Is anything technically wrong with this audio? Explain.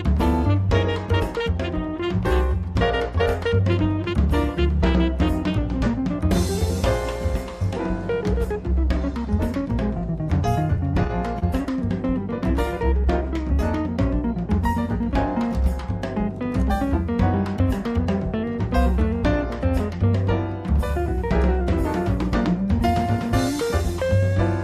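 Yes. Between 10.77 and 11.44 s there are repeated stalls (stutter): the audio catches four times. Packets arrived late or slower than playback, so the jitter buffer kept running dry, and each time the receiver stretched the preceding sound to bridge the wait, about 63 ms in all, the longest around 29 ms. Nothing is lost, but the passage drags and hiccups. A spectrogram shows short smeared, repeated frames; the waveform shows brief looped segments.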